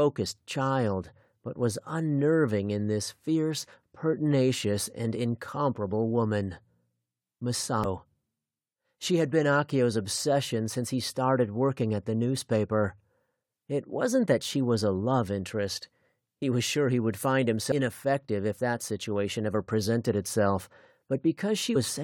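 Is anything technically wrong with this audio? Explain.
Yes, there's damaged data in a compressed stream, showing up three times as tiny blips at 7.84, 17.71 and 21.75 s. At each spot, some of the encoded file got mangled, so the decoder couldn't make sense of those frames. It lost its footing and hunted for the next valid frame header. What you hear is a short chirp, squawk, click or hole, under 20 ms each time, cutting abruptly into the audio.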